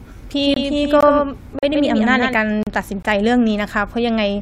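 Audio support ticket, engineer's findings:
Doubled audio track, 0.41–2.34 s. Likely a second capture path or misaligned edit holding two copies. A full-band duplicate of the speech trails by around 150 ms, roughly 5 dB down, with no decay or room colouring. Reads as a hard slapback echo on every syllable, switching in abruptly at 0.41 s and cutting off just as abruptly at 2.34 s. Not reverb: no tail, no spectral change. Check for a parallel monitor or loopback path feeding the mix.

Gap between stream segments, at 0.54–0.57 s (23 ms), 1.59–1.63 s (40 ms), 2.63–2.67 s (37 ms). Segment timestamps misaligned at the joins, which land at roughly 1 s spacing, and the player pads the gap with silence. Symptom is a hard-edged dropout in the speech, nothing lost, the timeline just pushed later each time. Varying hole lengths point at inconsistent timestamp offsets.

Gap between chunks, 1.01 s and 3.03 s, 20 ms each. 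Chunked transport, 2 s chunks, with silence inserted at each boundary, most likely codec padding or late chunk start in the player. Heard as a 20 ms hole at each join, same length both times, no audio missing. Regular 2 s period separates it from the segment gaps above.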